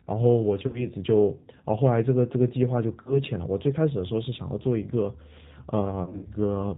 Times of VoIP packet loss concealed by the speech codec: 0.67-0.87, 3.02-3.21, 6.03-6.28

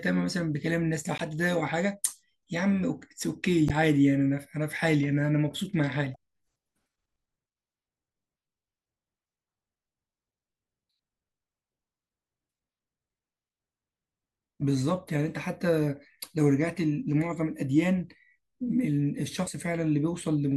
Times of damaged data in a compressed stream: 1.17-1.21, 3.66-3.71, 6.12-6.16, 19.44-19.48

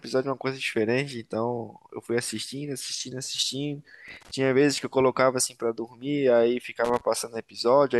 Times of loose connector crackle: 4.08-4.31, 6.85-7.01

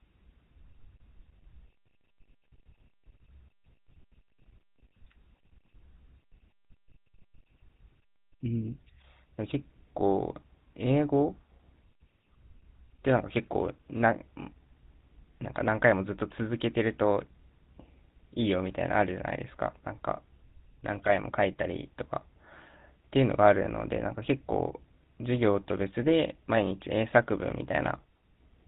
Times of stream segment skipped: none

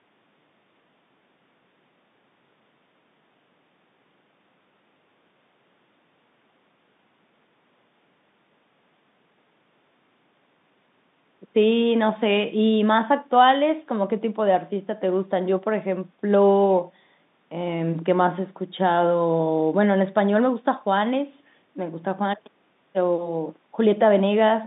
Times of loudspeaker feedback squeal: none

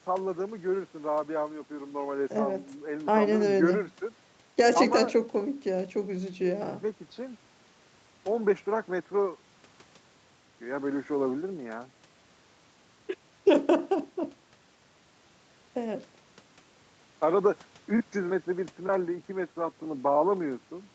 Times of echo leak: none

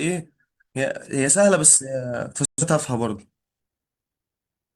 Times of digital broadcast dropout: 2.45-2.63

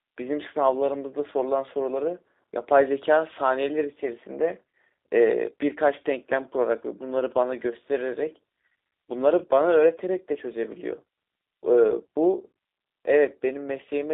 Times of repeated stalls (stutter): none

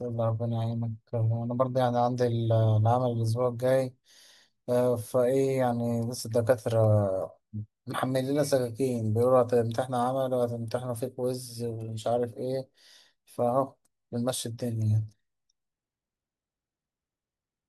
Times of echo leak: none

